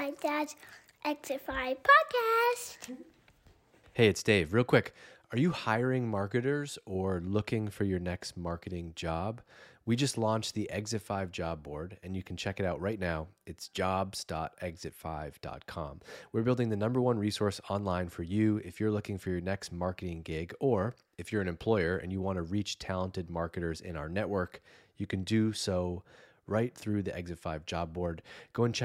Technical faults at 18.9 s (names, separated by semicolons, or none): none